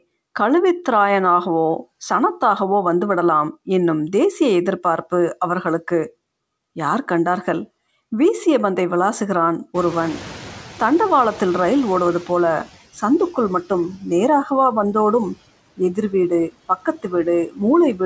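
Speech recorded over a call link whose audio stops at 8 kHz, which fits a G.722 wideband path, with room noise that jumps by about 21 dB around 9.5 s. At that rise the noise suppressor is caught up short: from 9.74 to 12.72 s the louder background passes with too little reduction, then sinks by about 10 dB over roughly 3 s as its noise estimate adapts. Near the end there is speech cut by the noise suppressor, which mistakes parts of the speech for noise and turns them down. This happens at 15.77–16.13 s (about 13 dB), 16.49–17.12 s (about 20 dB) and 17.47–17.61 s (about 15 dB), each affecting a fraction of a second and leaving sounds swallowed or faint.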